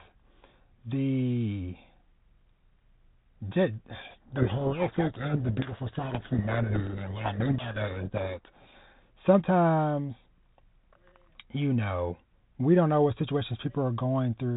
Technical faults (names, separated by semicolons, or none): codec payload misread